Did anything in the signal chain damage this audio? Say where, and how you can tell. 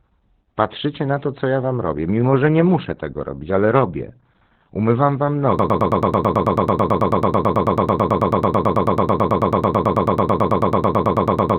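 Yes. At the codec stage, the whole speech clip shows Opus voice compression: nothing above about 4.3 kHz, muffled, hoarse and slightly robotic speech. That narrowband band limit and coarse excitation coding point to the SILK coder running at a very low rate, around 8 kbps.

From 5.59 s to the end, a broken-record loop repeats one 0.11 s fragment back to back, about 55 times, and the speech that should follow is lost. The likely cause is a stalled player or stream re-sending its last held buffer.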